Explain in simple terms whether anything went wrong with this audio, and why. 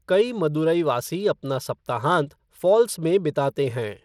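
Bluetooth SBC compression runs through the whole recording, likely from a Bluetooth link. Its simple coding squeezes the sound coarsely, so the speech picks up a gritty, flickering treble.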